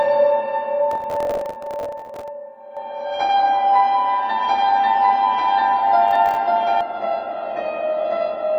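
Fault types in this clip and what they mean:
processor overload crackle: From 0.91 to 2.28 s and again from 6.08 to 6.37 s, a gritty, tearing crackle rides over the sound. The processor is not finishing each small audio buffer in time, and each missed deadline drops in a scrap of old audio with hard edges. The grain of the tearing fits buffers of around 5 ms. The first burst points to dozens of misses in a row, the second to about ten.
doubled audio track: From 2.77 to 6.81 s a second full-band copy of the sound runs about one and a half seconds behind the original, at roughly the same loudness. It carries no decay or room colour, so it is not an echo. It starts and stops abruptly, which likely comes from a slower second capture path recording the same signal and being mixed back in.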